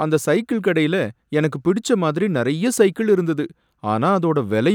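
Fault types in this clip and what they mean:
No technical faults can be heard anywhere in the speech recording: the signal stays continuous and steady, with no interruptions or damage of any kind.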